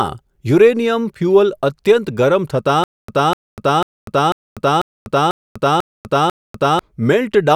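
From 2.84 s to 6.79 s the speech falls into a stutter with silent gaps: a 249 ms fragment repeats eight times, each followed by 245 ms of dead digital silence, a steady 494 ms cycle. This likely comes from a stalled player replaying its last buffer, losing the audio meant for that span.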